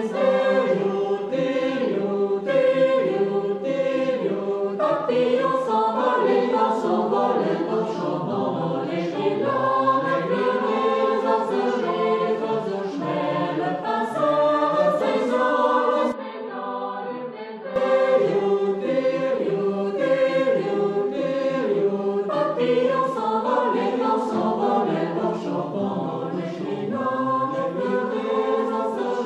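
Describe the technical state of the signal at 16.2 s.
Input switched to a poorer device, from 16.12 s to 17.76 s: at 16.2 s the capture has likely moved to a lower-grade input. Everything above 4.8 kHz is gone, so the sound turns dull and boxy. The level drops by roughly 10 dB, and a new background noise sits around 45 dB under the signal. The change comes with no gap of silence, and the fuller sound returns after 17.76 s.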